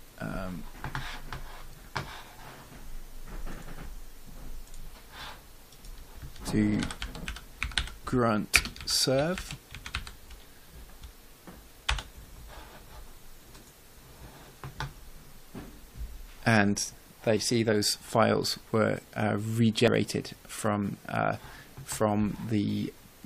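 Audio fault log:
0.74, 3.85, 5.20, 17.37 and 19.88 s, dropped buffer (overrun): each is a sudden jump forward in the sound. About 50 to 150 ms goes missing, and the edges join with no gap. Samples were likely overwritten before being read.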